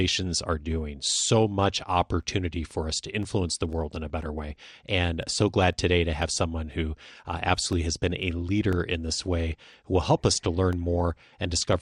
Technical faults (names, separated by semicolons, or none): MP2 compression; periodic USB or driver dropouts